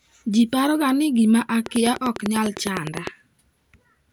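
Something, likely interference from nearby equipment or a faulty connection or power supply, injects a train of clicks from 1.66 to 3.08 s: around fifteen near-identical pulses at a regular 9.9 per second, peaking well above the speech, heard as steady ticking over the talking and its pauses.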